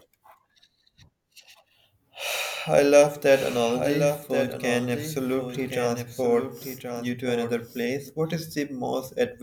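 A doubled audio track runs from 3.26 s to 8.10 s. A full-band copy of the speech trails roughly a second behind, about 10 dB quieter and dry, with no room tail. It starts and stops abruptly, likely because a slower second capture path was mixed in.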